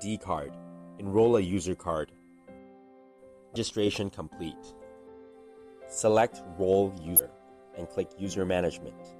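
At 3.53–3.56 s and again at 7.16–7.19 s there's a brief glitch from damaged data in the compressed stream: the decoder misreads corrupted frames, loses sync and hunts for the next header.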